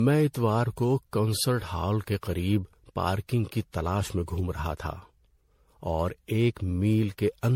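Speech runs through generation loss from start to finish: a swirly, hollow, smeared texture with blurred consonant attacks and nothing above 16.6 kHz. It is more degraded than a single pass would sound at the bandwidth heard, which fits MP3 around 64 kbit/s. That excess separates it from one low-bitrate encode. The likely cause is the audio being decoded and re-encoded around ten times, each pass on a shifted frame grid, compounding quantisation noise and spectral holes.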